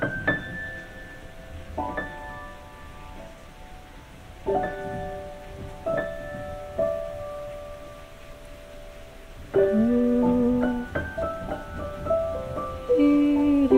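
Nothing here calls for comment: the sound runs along steadily with no glitches, gaps or breakups of any kind to point to.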